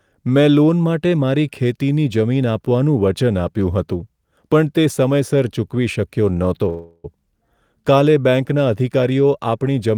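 At 6.69 s, after "તે સમયસર ચૂકવી શક્યો", a call audio freeze lasts until 7.06 s. The last sound stretches into a fading buzz. Held-up packets likely emptied the jitter buffer. Speech resumes intact, 0.35 s late.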